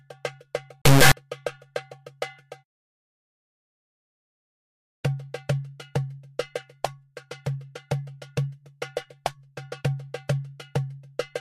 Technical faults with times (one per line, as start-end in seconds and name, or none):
0.82-1.12 integer read as float